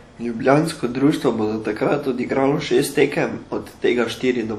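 Throughout the speech, plainly audible WMA compression damage, likely from the encoder's long transform blocks, smears quantisation noise across tens of milliseconds. It sounds washy and ringing, with hiss that breathes with the signal. That is unlike a plain low-pass, though content stops at 19.4 kHz, fitting roughly 48 kbps.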